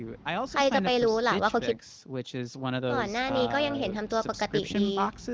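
No faults are audible in the speech; the call microphone processing leaves nothing above 8 kHz, and the AMR wideband (HD Voice) coding sounds like one of its upper rates, with at most faint codec traces.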